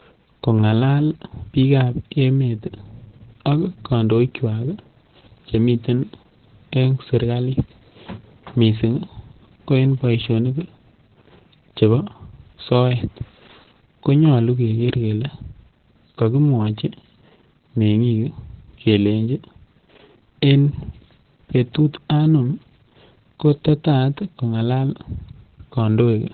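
Opus voice compression runs throughout the speech, with nothing above about 4.4 kHz. The SILK coder has cut the band to narrowband and quantises the excitation coarsely, which points to roughly 8 kbps. The speech sounds muffled, hoarse and faintly robotic.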